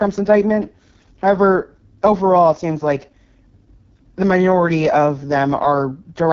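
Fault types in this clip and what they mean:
AMR wideband (HD Voice) codec: the speech was coded at what sounds like the lowest 6.6 kbit/s rate, so it turns rough and raspy, with nothing above 7.3 kHz.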